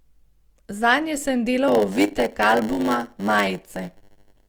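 Speech that from 1.67 s to the end carries a 100 Hz buzz and slows to about 0.92 speed with its timbre kept: a block size mismatch (padded), zero-filling every block.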